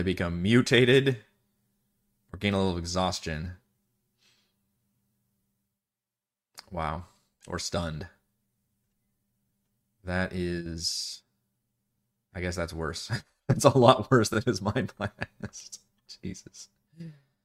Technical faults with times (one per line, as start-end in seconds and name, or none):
14.33-14.35 repeated frames